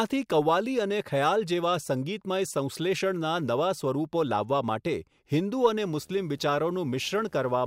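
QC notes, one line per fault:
5.84–7.67 s, video or display buzz: a display or video cable running at a 75 Hz field rate couples its refresh signal into the audio path, so a buzz at 75 Hz with harmonics appears under the speech and continues to the end of the clip. Because each field refresh is a sharp-edged pulse, a gritty hash rides above the hum. It sits roughly 35 dB below the speech.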